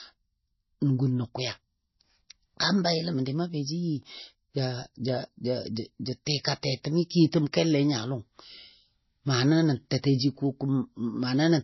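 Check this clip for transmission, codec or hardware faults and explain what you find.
One codec fault runs through the whole speech clip. Throughout, the audio is low-bitrate audio saved at a high bitrate: nothing sits above 5.8 kHz, and the smeared, swirly coding artefacts of a very low-bitrate MP3 remain. The likely cause is a file re-encoded at a much higher bitrate, which cannot restore the detail already discarded. A plain band limit would leave the speech clean below its cut-off, so the surviving artefacts are what set this apart.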